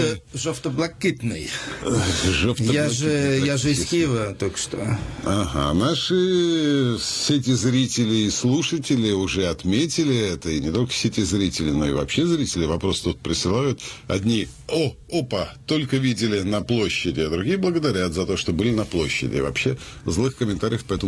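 From 17.8 s to 21.0 s the audio carries a resampler restarted on every block: the rate converter handled each 100 ms chunk in isolation, so at every chunk edge it worked without the true neighbouring samples and left a small error behind. This is heard as a steady ticking at 10 Hz that rides on the signal. A spectrogram shows faint broadband vertical lines spaced 100 ms apart, and the waveform shows tiny discontinuities at each block boundary.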